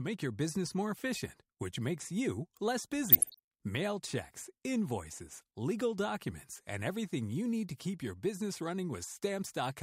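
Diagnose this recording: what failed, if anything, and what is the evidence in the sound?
DAB burbling is the fault, at the codec stage of a weak broadcast reception. It starts at 3.08 s, just after "which makes you less", and runs to 3.39 s. A shorter burst follows from 9.45 to 9.49 s. Both bursts put short blips of noise into single sub-bands over the speech. Bit errors got past the error correction into the MP2 data, so corrupt samples put blips in single sub-bands. The first burst points to a dozen or so frames at around one percent bit errors.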